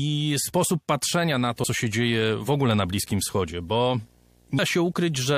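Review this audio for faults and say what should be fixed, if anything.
Video or display buzz runs from 1.28 s to the end of the speech clip. A screen or video cable couples into the audio path, giving a 59.94 Hz field-rate buzz with hash above it and a thin 15.7 kHz line-rate tone, roughly 35 dB below the speech. Prevent it by rerouting audio cables away from displays and video leads, and by fixing ground loops between the video and audio equipment.

Compressed frames skipped at 4.58 s: the decoder drops a run of compressed frames, either missing from the file or rejected as damaged, so the audio jumps ahead by around 150 ms, which fits about seven 23.2 ms frames. Prevent it by re-encoding or re-transferring from an intact source and verifying file integrity before decoding.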